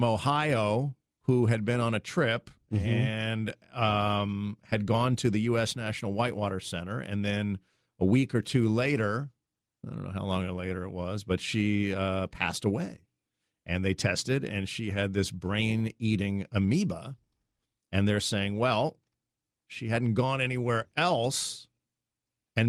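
A speech recording, and nothing is technically wrong with it.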